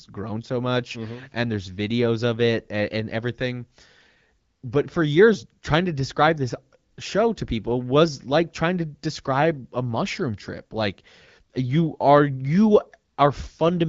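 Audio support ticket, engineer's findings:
Nothing to flag here, just speech coming through an AMR wideband (HD Voice) link whose character fits the 12.65 kbit/s mode, with no faults found anywhere in the recording.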